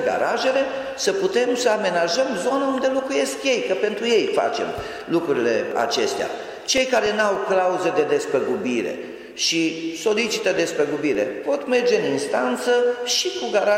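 CD scratch ticks occur from 6.20 to 7.64 s (six ticks, the longest a few milliseconds) and from 9.99 to 11.72 s (seven, shorter still). Each disc revolution hits a blemish beyond error correction, so the player interpolates or mutes samples, leaving regular clicks about four per second.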